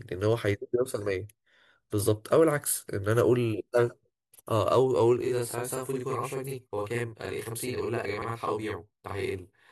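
A speech recording with two faults. Repeated frames cause brief stutters at 2.69–2.71 s and 5.50–5.52 s (21.3 ms each) and a longer one at 8.21–8.28 s (64 ms), where a block of coded audio replays once and lengthens the sound. From 5.21 s to 9.69 s, a channel delay (doubling) makes the speech sound doubled with a steady 42.67 ms slap echo, which fits one channel lagging by a 2048-sample buffer before the channels are summed to mono. The doubling differs from the stutters because it is a continuous, same-level echo on everything, while each stutter replays a short block only once.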